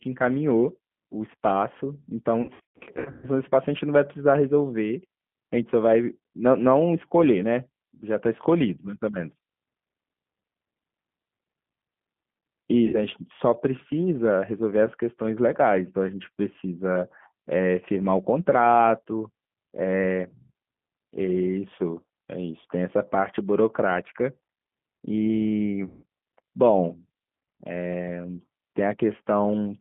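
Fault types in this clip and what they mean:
G.729 codec: A low-rate speech codec that rebuilds the voice from a vocal tract filter, pitch predictor and sparse pulses at 8 kbit/s. Throughout, the band is confined to roughly 150 Hz to 3.4 kHz, and the rough, synthetic coding texture is plainly audible.
VoIP packet loss concealed by the speech codec: Missing packets were filled by extrapolating the last pitch and filter with falling gain, giving buzzy or noisy, fading smears. The worst stretch, 2.42 to 3.26 s, has gaps scattered across about 810 ms. Shorter gaps occur at 12.87 s and 25.85 to 26.03 s.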